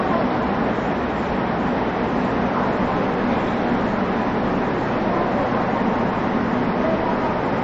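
Throughout, the sound has plainly audible MP3 compression damage, likely from a low bitrate near 30 kbps: nothing above 7.5 kHz, watery swirling, smeared attacks.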